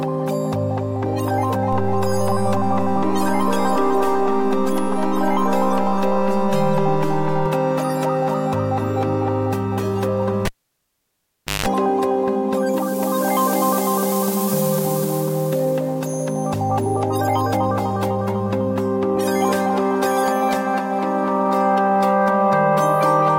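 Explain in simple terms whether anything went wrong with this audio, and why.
Two things went wrong. The first is a DC step. At 1.73 s the waveform's resting level suddenly shifts, like an electrical offset switching in. It stays shifted until 7.46 s, then drops back. Each shift makes a low thump, while the sound itself carries on.

The second is a cable pulled and plugged in. At 10.45 s a pop is followed by near silence lasting about 1.16 s. A short burst of 50 Hz mains buzz, about 0.17 s, comes as the plug touches. Another pop at 11.66 s brings the sound back.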